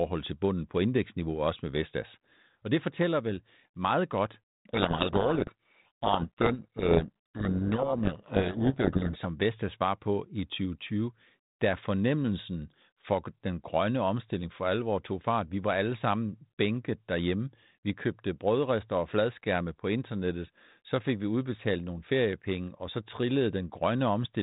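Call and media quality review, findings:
Codec payload misread, 4.74–9.17 s, just after "fortæller vel meget godt". Speech buried in harsh distortion. Looks like the G.726 decoder reading the code words with the bit order reversed, so every sample step lands wrong. Clears at 9.17 s.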